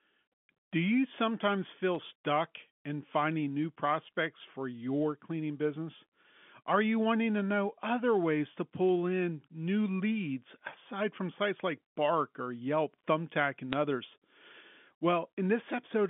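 Bit errors on the digital phone line appear at 1.95 s, from 8.86 to 8.92 s, and at 13.73 s. Flipped bits corrupt single samples, roughly 0.15, 0.05 and 0.1 percent of bits in turn. A hit on a high bit or on the sign of a loud sample sounds like a sharp tick, and many together sound like crackle over the narrowband telephone speech.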